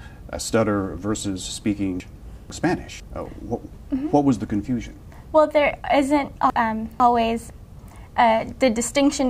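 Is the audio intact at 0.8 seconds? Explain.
Yes, at 0.8 seconds the audio is intact, with no dropout, click, distortion or other fault at that moment.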